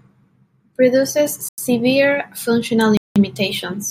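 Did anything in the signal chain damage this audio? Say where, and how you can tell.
Yes. Blocks of digital silence at 1.49–1.58 s and 2.97–3.16 s point to buffer underruns in the driver stage, consistent with 4096- and 8192-sample zero-filled blocks.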